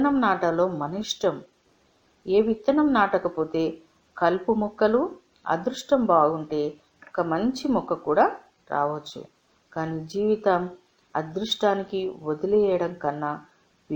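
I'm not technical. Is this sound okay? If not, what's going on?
No. Imaging from linear upsampling runs through the whole clip. The sound was converted from a 22 kHz rate up to 48 kHz by simply drawing straight lines between the original points, which is a crude way to fill in the gaps. That dulls the very top of the sound and leaves faint mirror copies of it, roughly between 11 and 22 kHz. You may hear them as a light metallic shimmer on hissy and high sounds.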